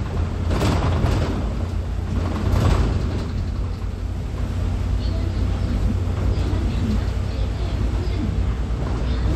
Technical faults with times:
none

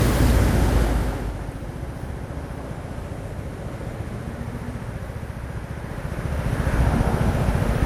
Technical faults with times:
0.00-7.86 generation loss

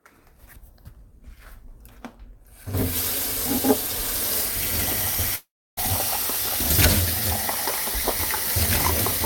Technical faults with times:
5.35-5.79 long network dropout

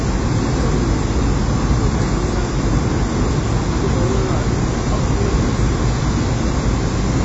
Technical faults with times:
0.00-7.25 WMA compression

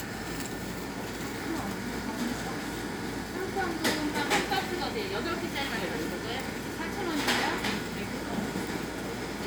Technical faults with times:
none

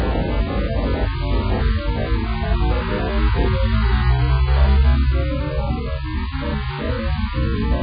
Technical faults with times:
0.00-7.83 AAC compression

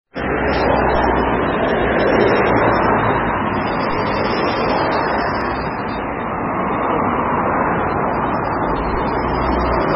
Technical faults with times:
0.00-9.95 MP3 compression
3.91 DC step
5.41 dropped samples

